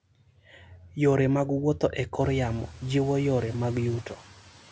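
The noise suppressor mistook parts of the speech for background and turned them down: from 0.58 to 0.96 s by up to about 8 dB, and from 4.03 to 4.57 s by up to about 12 dB, so soft sounds and endings come out swallowed and faint.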